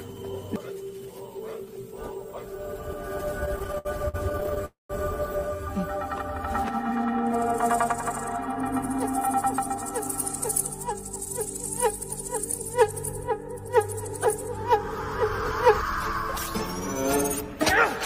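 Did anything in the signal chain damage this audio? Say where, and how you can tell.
Yes. From 3.45 to 4.65 s the sound drags and stutters through 23 short holds, the longest 68 ms, about 27% of that stretch. This is repeated stalls (stutter) at the network stage: packets arrived late, the jitter buffer kept emptying, and the receiver held the last sound until more arrived.

Right after, from 4.65 to 4.91 s, the sound hangs for 242 ms and fades to 160 ms of silence before resuming with nothing lost, pushing everything after about 242 ms later. This call audio freeze is likely a longer packet hold-up that drained the buffer completely.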